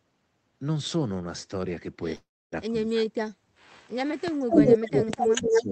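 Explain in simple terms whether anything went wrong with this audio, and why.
Three kinds of trouble can be heard in this speech.

A call audio freeze occurs from 2.15 s to 2.54 s. The speech stalls for about 0.37 s, and most of that, roughly 0.29 s, is plain silence after a brief carried-over tail of sound. The likely cause is network packets arriving late, so the receiver's buffer ran dry and had to wait. When the packets arrived, the speech resumed exactly where it had stopped. Nothing was lost, but everything afterwards now plays later.

Speech suppressed in double talk happens twice. From 2.68 s to 3.28 s the speaker nearly vanishes, with about half a second of that stretch affected, cut down hard. From 4.47 s to the end the drop is milder but still audible. Both are likely the echo canceller reacting to the far side talking at the same moment. Unable to tell this voice apart from the far side's loudspeaker echo, it turned everything down.

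An echo leak runs from 4.50 s to 5.62 s. A second, quieter copy of the voice trails the original by about 0.24 s, sounding like a faint repeat. This is likely a loudspeaker on the other end whose microphone picked the sound back up, with its echo canceller failing to remove all of it before sending it back.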